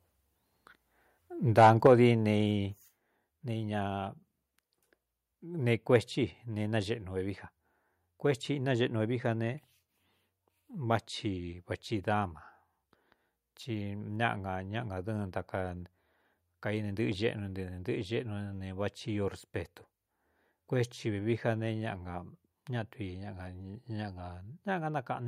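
Microphone overload, likely from an input volume set too high, drives this speech recording about 4 dB past the converter's ceiling between 1.58 and 1.87 s. A few percent of the samples there have their tops sheared flat, giving the loudest syllables a harsh, crackling edge. The microphone volume then appears to be stepped down twice by the call software, which likely reacted to that clipping, each time by about 4 dB, at 1.87 s and again at 2.88 s. At each step the voice and the background both drop abruptly in level together.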